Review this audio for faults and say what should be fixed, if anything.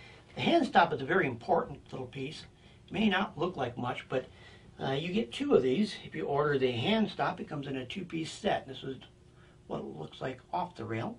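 No faults; nothing to fix.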